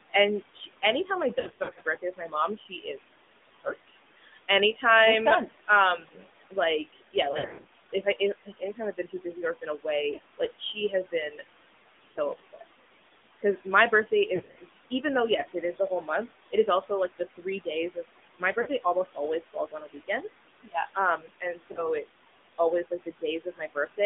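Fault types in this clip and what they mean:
noise suppressor artifacts: The suppressor pushes the room noise, which sits about 15 dB under the speech, down by about 16 dB in the gaps. The background pumps low between phrases and rises back under the talking.
AMR narrowband mobile codec: Everything goes through a narrowband mobile speech coder that passes only about 200 Hz to 3.6 kHz. The buzzy, synthetic edge on the voice is plainly audible, and the grain fits AMR-NB running in its 10.2 kbps mode.
speech cut by the noise suppressor: Here the suppressor mistakes pieces of speech for noise and turns them down with the background, by up to about 17 dB. Soft consonants and word endings come out swallowed, in patches from 0.13 s almost to the very end.
lost AMR speech frames: When frames drop out, the decoder stretches the last good sound and fades it, giving brief dips and warbles. The worst clusters fall around 1.4–1.8 s, 7.3–7.7 s and 14.4–14.6 s, with shorter blips at 10.1, 12.1, 18.6 and 21.7 s.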